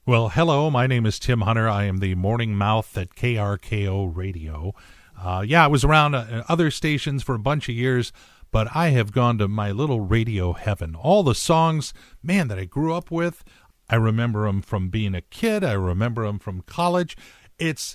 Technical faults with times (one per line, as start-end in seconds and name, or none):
none